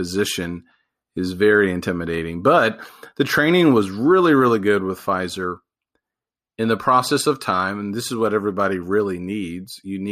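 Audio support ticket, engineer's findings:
No faults found.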